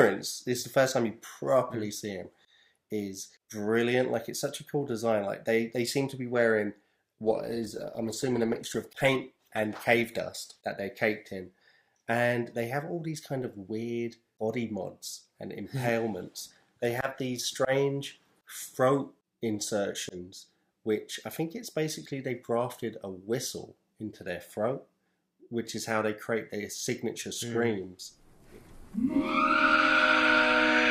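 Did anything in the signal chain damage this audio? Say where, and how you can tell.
Yes: a call bitrate drop from 7.24 to 12.06 s. A fall in the call's bandwidth estimate starved the codec; the coarse, muffled sound fits a fall from roughly 96 to 18 kbps.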